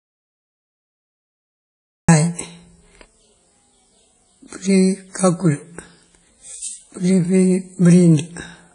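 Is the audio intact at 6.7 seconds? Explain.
No. Throughout, including at 6.7 s, this speech has nothing above 10.1 kHz and carries early-stage coding artefacts. The likely cause is low-bitrate audio saved at a high bitrate: the high-bitrate MP3 could not restore what a low-bitrate first encoding had already discarded. That inherited damage distinguishes it from a plain low-pass filter.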